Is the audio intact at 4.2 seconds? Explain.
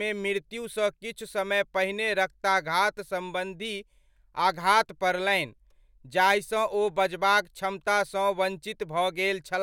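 Yes, the audio is intact at 4.2 seconds, with no audible fault at that moment.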